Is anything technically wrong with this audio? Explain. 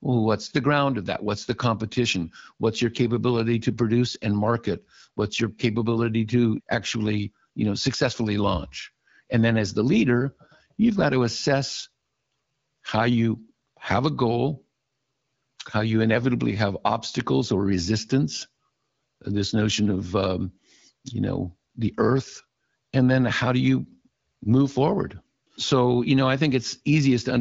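No, there's nothing wrong here: it's just speech coming through an AMR wideband (HD Voice) link at 12.65 kbit/s, doing exactly what that codec normally does.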